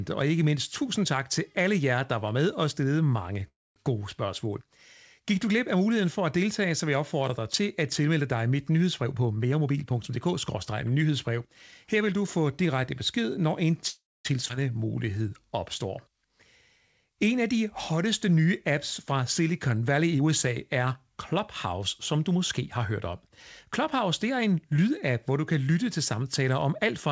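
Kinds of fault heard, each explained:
Call audio freeze: At 3.48 to 3.78 s, right after "med og stillede mange", and again at 13.88 to 14.27 s, the sound hangs as a short fading buzz, then drops to silence for about 0.23 s before resuming with "gode spørgsmål" in the first case. The likely cause is packets held up in transit, leaving the jitter buffer empty. Nothing is lost, only delayed. On a spectrogram it shows as a smeared, decaying band followed by a blank gap in the band-limited content that stops at 8 kHz.
Jitter buffer speed-up: From 9.03 to 11.09 s, starting after "at tilmelde dig mit", the audio runs at about 113% speed. From 20.00 to 23.09 s it runs at about 109%. Each time the receiver trimmed roughly a third of a second in tiny pitch-period slices to shrink an overfull buffer, so delivery sounds hurried but pitch holds. The spectrogram shows harmonics at unchanged heights with compressed timing. 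The waveform shows syllables packed closer.
Skip ahead: At 14.49 to 14.51 s, just after "direkte besked når en", playback leaps forward with almost no gap. Roughly a sixth of a second of audio is simply gone, and the two sides are butted together. This happens when a stretch is dropped while later audio is already queued. The waveform shows an abrupt discontinuity, and the spectrogram shows a sudden jump in formant pattern rather than a silent column.
Jitter buffer slow-down: From 14.78 to 15.51 s, the receiver stretched the audio to about 91% speed, adding 72 ms by repeating single pitch periods to rebuild its reserve. Sounds drag slightly at unchanged pitch. The waveform shows near-identical cycles copied back to back. The spectrogram shows harmonics at the same frequencies, drawn out in time.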